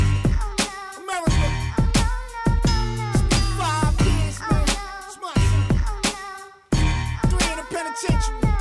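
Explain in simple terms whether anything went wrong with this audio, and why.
Nothing went wrong with this audio, so there is nothing here to explain.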